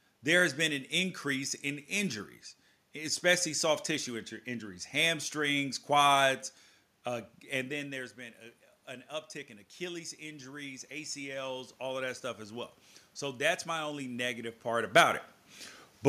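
Automatic gain rising runs from 9.77 to 14.59 s, beginning just after "an uptick in". The level reaching the microphone had fallen by about 13 dB, following the talker's shift away at roughly 7.5 s. The gain control responded by slowly adding about 6 dB over nearly five seconds. Voice and room noise swell together as the gain climbs, until the talker moves again around 14.5 s.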